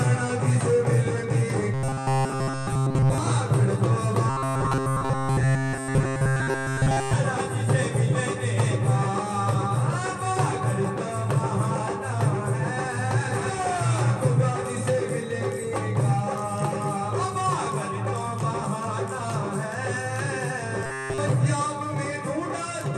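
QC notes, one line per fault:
1.74–3.18 s, 4.30–7.13 s and 20.86–21.18 s: robotic sound from repeated short buffers. Each stretch collapses into a rigid, metallic buzz pitched at 133 Hz, with essentially none of the real audio getting through. That's most likely new data arriving too late and the player looping the last chunk of roughly 7.5 ms to fill the gap. The repeat rate is what sets that fixed buzz pitch.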